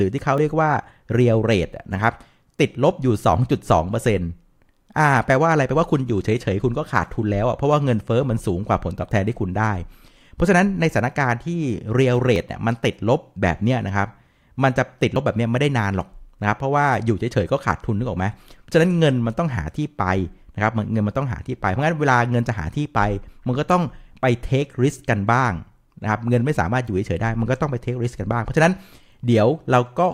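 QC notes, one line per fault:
0.38 s, 12.36 s and 15.16 s: dropped buffer (overrun). Each is a jump as the speech skips ahead with no silence. Roughly 20 ms goes missing at the first two, about 40 ms at 15.16 s. Likely cause: samples overwritten before being read, joining both sides directly.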